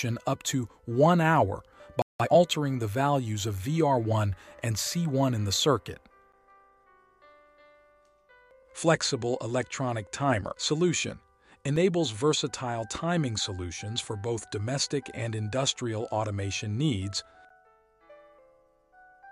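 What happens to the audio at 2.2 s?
At 2.02 s the output cuts to silence in a playback stall. The sound halts mid-flow for about 0.18 s, until 2.20 s. The player likely ran short of data or had its thread blocked. Then playback resumes.

From 2.20 to 2.36 s comes a time-compressed catch-up. The player trims its backlog by dropping short slices and cross-fading the joins. The sound runs at double speed but keeps its normal pitch.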